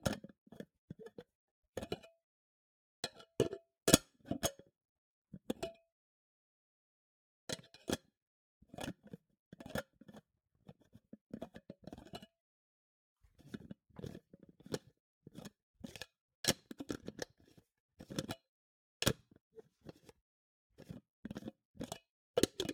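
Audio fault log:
No faults heard anywhere in this audio.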